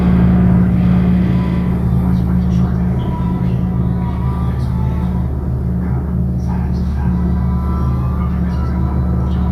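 No technical faults can be heard anywhere in this audio.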